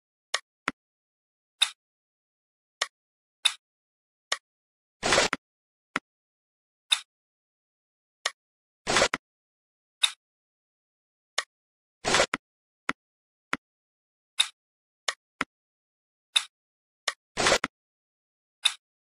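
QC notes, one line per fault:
Nothing stood out on listening.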